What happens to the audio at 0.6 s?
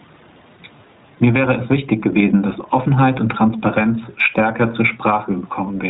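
From 0.58 to 0.61 s there is a lost iLBC frame: a brief gap that fits a single 20 ms frame going missing. The decoder fills it by repeating the last pitch cycle blended with noise, so instead of silence or a click you hear a short, slightly buzzy, held vowel-like sound. Unlike a dropout in a codec that depends on earlier frames, the sound recovers almost immediately afterwards, because each iLBC frame decodes independently.

Around that moment, and throughout the clip, the iLBC codec itself is audible. The audio is narrowband, with nothing above 4 kHz, as is usual for iLBC; here it runs with 20 ms frames in the 15.2 kbps mode. The result is a slightly rough, synthetic texture. That is a constant band limit and coarseness, not a momentary event like the lost frame, and it is plainly audible here.

Gain pumping also runs through this point. The level swings by around 10 dB, and loud and soft parts are squashed together; the background room noise sits about 41 dB below the speech. 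This is likely caused by gain set far too high ahead of a fast limiter. It differs from a plain noisy room because the level moves with the speech instead of staying steady.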